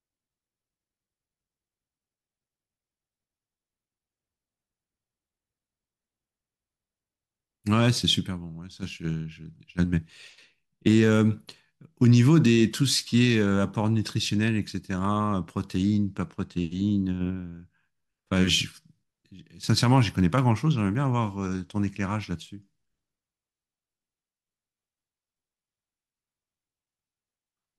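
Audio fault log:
No faults heard anywhere in the speech.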